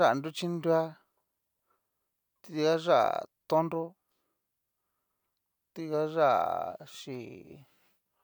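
Nothing in the speech here points to a technical fault; it just runs along without anything going wrong that a listener would pick up on.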